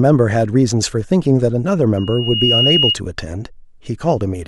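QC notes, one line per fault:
1.97–2.97 s, loudspeaker feedback squeal: the microphone is hearing the loudspeaker it feeds, and around 2.9 kHz the loop gain climbs past one, so that frequency recirculates and reinforces itself on every pass. In this speech clip the tone swells over roughly half a second into a piercing whistle that sits about 5 dB above the speech, holding steady until it cuts off near 2.97 s when the loop is broken.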